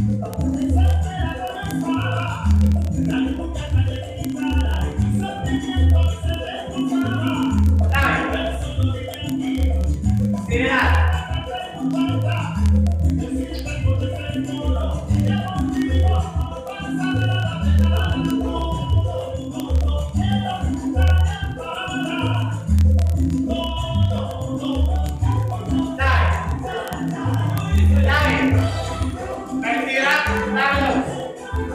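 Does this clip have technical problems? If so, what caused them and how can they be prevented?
Yes: word clock ticks run from 0.1 s to 31.74 s, sharp clicks roughly every 30 ms. A receiver clock about 1000 ppm off the sender's drops or repeats one sample per slip, leaving regularly spaced thin vertical lines on a spectrogram and tiny waveform steps. Lock the receiver to the sender's word clock or use a sample-rate converter.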